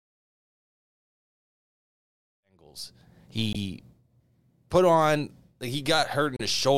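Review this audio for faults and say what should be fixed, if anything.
Damaged data in a compressed stream occurs at 3.53–3.56 s, just after the smooth fade-in that rises from around two and a half seconds and completes at 3.39 s, and again at 6.36–6.41 s. At each point corrupted bytes make the decoder misread frames, lose sync and hunt for the next header, producing a brief glitch. To prevent it, re-encode from an intact source and verify the file with checksums before distribution.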